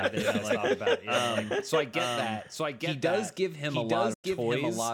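Throughout the speech, a doubled audio track runs underneath: a second full-band copy trails by about a second at roughly the same level. Unlike an echo or reverb, it has no decay and no room colour, which points to a likely second capture path or misaligned edit.

From 4.14 to 4.25 s, a digital broadcast dropout fades the sound out within about 8 ms and leaves silence. When it resumes, about 96 ms of programme is missing, consistent with three frames failing. The fast fade and lost content set it apart from a plain level dip.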